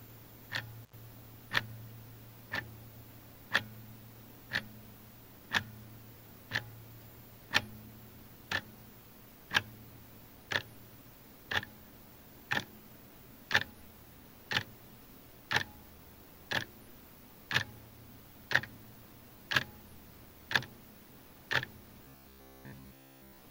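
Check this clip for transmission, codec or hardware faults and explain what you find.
Two faults are audible.

From 0.83 to 0.93 s there is an intermittent contact: a loose cable or plug breaks the connection for about 83 ms. The sound cuts out, with crackle at each edge and hiss filling the gap while the line is open.

From 22.04 s to the end of the clip comes robotic sound from repeated short buffers, likely because new audio arrived too seldom and the last fragment of about 15 ms was replayed in its place. Most of the real sound is skipped, and a rigid, metallic 66.8 Hz buzz replaces it.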